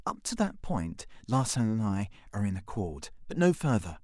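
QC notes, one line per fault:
No faults heard.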